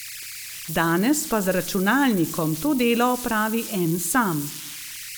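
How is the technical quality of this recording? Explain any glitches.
The quality is compromised by converter idle tones, audible throughout the speech at about 12 dB below the signal. An undithered delta-sigma converter settles into repeating bit patterns on quiet input, producing a whistle around 2 kHz in pauses and graininess under soft speech. A spectrogram shows a thin horizontal line near 2 kHz.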